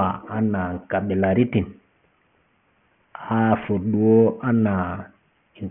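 It's a speech clip with aliasing from start to finish: high-frequency content folds back around 3 kHz into gritty, metallic tones roughly 25 dB under the voice, which fits a drop to about a 6 kHz sample rate without an anti-aliasing filter beforehand.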